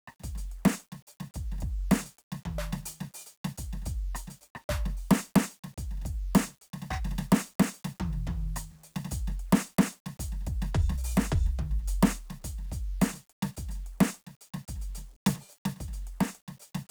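From start to finish, the music carries a grainy, signal-following distortion, the mark of low bit depth without dither. The likely cause is the audio being rounded to about 9 bits with no dither, leaving the error only around 40 dB below the music. Quiet passages turn gritty. On a waveform, low-level sections show visible staircase steps. A spectrogram shows hash that rises and falls with the music rather than a steady noise floor.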